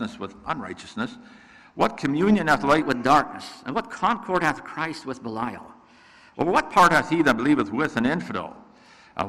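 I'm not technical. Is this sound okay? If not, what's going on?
No. From 2.82 to 6.79 seconds there's a section at the wrong speed. It plays about 1.12 times too fast, sounding hurried and roughly two semitones higher, likely from a wrong playback clock.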